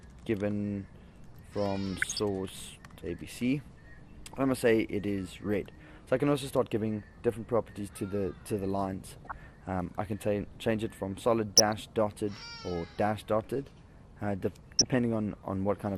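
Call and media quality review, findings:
MP2 compression throughout, likely cause: too few bits per sub-band at a rate consistent with around 80 kbps; upper bands switching off and flickering, coarse quantisation left in the rest. Dull top end with a gurgling, granular edge across the whole clip.

DAB burbling at 2.02–2.19 s, 9.16–9.32 s, 11.54–11.76 s and 14.72–14.96 s: reception-grade bit errors, a fraction of a percent, slipping past error correction into MP2 frames. Corrupt samples put short noise blips in single sub-bands and wrong scale factors make sub-bands jump in level for up to a frame, with roughly seven to eleven frames hit per span.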